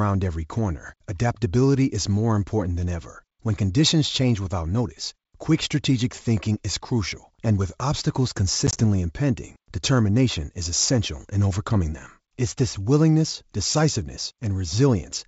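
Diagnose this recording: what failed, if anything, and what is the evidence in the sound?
The network stage is where this one broke: packet loss on an ADPCM call, between about 8.67 and 8.80 s. You hear short hard-edged dropouts of silence, about 40 ms missing in total across roughly 100 ms, the longest gap about 20 ms, so it sounds like a handful of lost packets. After each hole the speech comes back slightly distorted, because the decoder's adaptive predictor and step size have drifted from the sender's. It settles again within a few tens of milliseconds. The G.722 link itself, at 64 kbit/s, stays clear up to 7 kHz.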